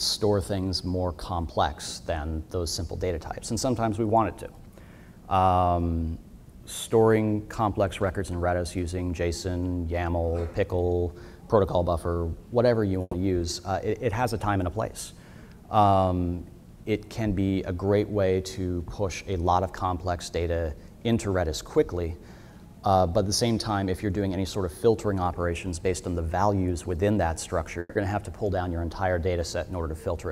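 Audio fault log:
13.01–13.15 s, burst of packet loss: about 120 ms went missing; the receiver stretched the last sound into a fading buzz or hiss, then audio resumed further on.
27.79–27.97 s, long network dropout: likely a network interruption; the last sound is carried on as a fading tail for about 160 ms, then audio returns with that stretch gone.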